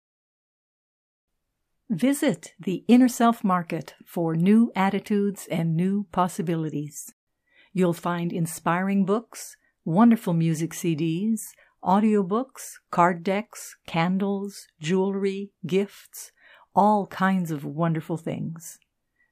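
A speech clip whose sound cuts to silence mid-flow from 7.12 to 7.27 s, about 150 ms, before resuming; this playback stall likely came from the player briefly running out of data.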